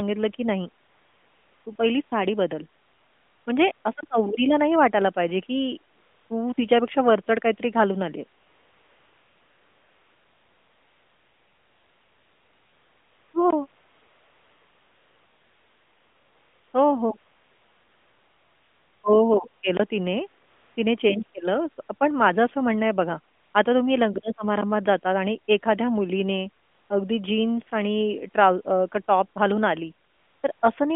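From 0.84 s to 30.6 s, AMR comfort noise repeatedly replaces the pauses: the phone stopped sending speech frames and the receiver filled in a smooth, steady hiss. It comes in sixteen patches, the longest running 8.40–13.34 s and 13.68–16.74 s, all over the narrowband phone-line sound.

Four blocks of digital silence cut in: 4.01–4.03 s, 13.51–13.53 s, 19.77–19.80 s, and a shorter tick at 24.61 s. They point to buffer underruns, fitting 1024-sample and 512-sample buffers.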